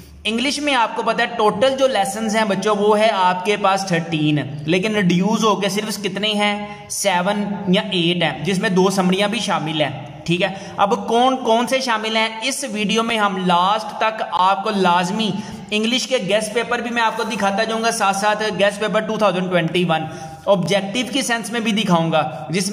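At 13.10 s, 14.37 s and 20.66 s the sound drops out in a block of digital silence: the output was left holding zeros because a buffer wasn't filled in time. The first and last gaps last 5.8 ms, which fits a 256-sample buffer, and the middle one lasts about 17 ms. The two short gaps are heard as a tick, and the middle one as a short hole. A waveform shows a flat line with vertical edges. A spectrogram shows a thin blank gap.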